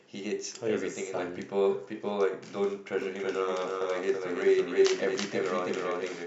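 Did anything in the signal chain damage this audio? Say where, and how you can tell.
Yes. From 3.02 s to the end there is a doubled audio track: a full-band copy trails about 300 ms behind, about 5 dB quieter, starting abruptly with no reverberant colour. On a spectrogram every pattern repeats, shifted right. The likely cause is a slower second capture path at the driver stage.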